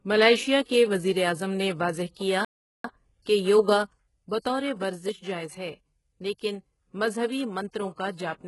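Throughout the speech, the treble has the sound of heavy HE-AAC compression, at a rate that fits roughly 12 kbps. Only the lower spectrum is truly coded. The top end is likely rebuilt by spectral band replication, with lower bands copied upward and shaped by a coarse envelope. That treble is not the original. Its harmonics do not line up with those below the crossover. Sibilants and bright consonants come across as gritty and synthetic.

At 2.13 to 2.17 s there is pre-echo. It comes just after "کے وزیراعظم نے واضح" and just before "کیا کہ یوگا". A sharp attack sits late in a transform block. The codec spreads its noise across the whole block, so the quiet moment before the attack fills with hiss. That hiss lasts about 33 ms. The attack itself sounds softened and smeared.

From 2.45 to 2.84 s there is a playback stall. The sound cuts out in mid-flow for about 396 ms. The player likely ran short of data, or its thread was held up, and the output went silent until it recovered. 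The gap is clearly audible. It is not a natural pause in the speech.

Pre-echo returns at 3.22 to 3.26 s. It follows "وزیراعظم نے واضح کیا" and precedes "کہ یوگا". Once again a short wash of hiss runs ahead of an attack, this time for about 36 ms. The block's noise, sized for the loud part, spills into the silence before it. The onset loses its crispness.

At 3.98 s one channel drops out, right after "واضح کیا کہ یوگا". It stays lost to the end. The level falls abruptly by about 6 dB. This is what a mono sum does when one of two matching channels is likely lost. The tone does not change. The rest of the clip is simply quieter.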